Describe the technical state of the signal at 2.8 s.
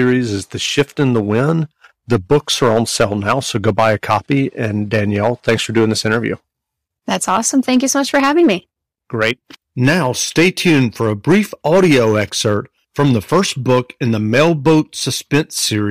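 At 2.8 s the speech is hard clipped, as it is throughout. Driven about 8 dB too hot, roughly 3 percent of samples are cut flat, adding harsh crackle.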